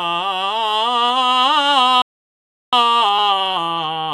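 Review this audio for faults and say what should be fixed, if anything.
At 2.02 s the music just stops dead and stays silent until 2.73 s, a playback stall of about 0.71 s. The likely cause is the player running dry or its output thread getting blocked, so the buffer had nothing to hand the device until it recovered. A deeper playback buffer and keeping blocking work off the audio thread should stop this.

From 2.73 s right through to the end you get time-compressed catch-up. The player is trimming its backlog by dropping small slices and cross-fading the joins, so the music runs about 1.1 times fast at its normal pitch. Clearing the backlog gradually, or skipping it cleanly instead of squeezing it, would avoid the hurried stretch.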